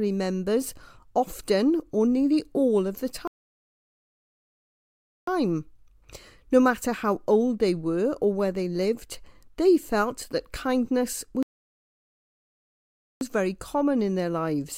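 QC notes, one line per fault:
3.27–5.27 s and 11.43–13.21 s, playback stall: the speech drops to silence for 2 s, then 1.8 s, and resumes, likely because the player ran out of buffered data.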